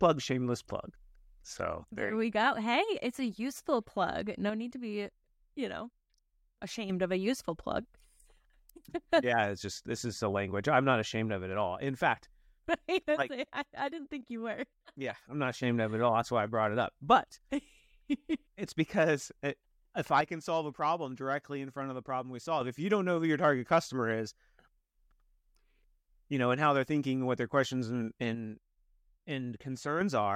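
Speech falls abruptly by about 6 dB four times: 4.50 to 6.90 s, 13.23 to 15.63 s, 20.21 to 22.61 s, and 28.35 to 30.01 s, after "what their questions and". The likely cause is one channel dropping out. The mono sum halves, then snaps back.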